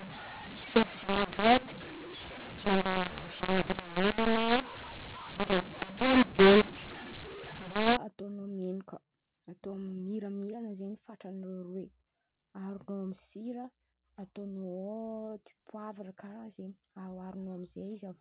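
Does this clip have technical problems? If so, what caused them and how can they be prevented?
Yes. From the start to about 7.97 s there's a mu-law and A-law mix-up: the speech was coded as A-law but decoded as mu-law, so the two companding curves don't match and levels get scrambled, with some samples blown up and others squashed. That's why the speech sounds harsh and gritty, and why the gaps fill with hiss instead of going quiet. After that the G.711 A-law decode is right, with its 4 kHz telephone ceiling. To prevent it, carry the G.711 law in the signalling or metadata and check it at the decoder.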